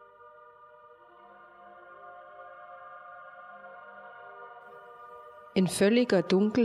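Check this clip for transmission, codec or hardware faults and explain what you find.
Nothing stood out on listening to this clip.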